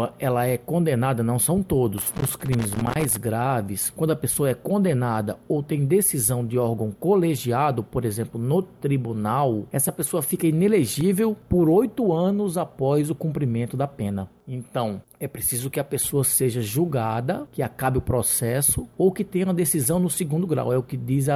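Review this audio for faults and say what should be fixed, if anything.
Two irregular bursts of crackle and scratching break into the audio, the first from 1.98 to 3.18 s and a much shorter one from 10.87 to 11.01 s. This is loose connector crackle: a worn or dirty contact somewhere in the chain is intermittently opening and closing as it shifts, chopping the signal on and off in rapid, uneven fragments for as long as the movement lasts. Cleaning or replacing the suspect connector and securing the cable against strain should prevent it.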